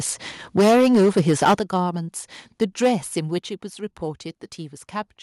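The input gain was likely set too high, causing microphone overload from 0.57 to 1.55 s. The signal runs about 13 dB past the converter's ceiling and roughly a fifth of the samples are flattened, giving the speech a harsh, crackling edge. Software likely reacting to that overload gives a microphone volume step down at 0.6 s of about 2 dB, then one at 1.59 s of about 8 dB. Voice and background drop together in level each time.

Overload likely returns from 2.61 to 2.92 s, about 6 dB over with only a few percent of samples clipped, so the crackle is lighter. A further microphone volume step down, likely the same automatic correction, cuts the level by about 7 dB at 3.39 s.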